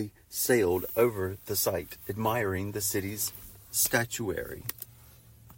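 No technical faults are audible.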